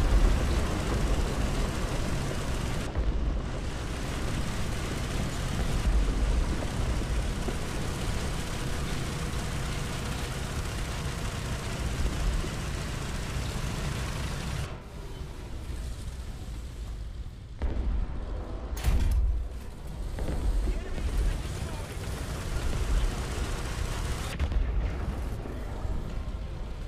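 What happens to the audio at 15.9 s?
Nothing goes wrong at 15.9 s; the audio plays through that moment without any audible fault.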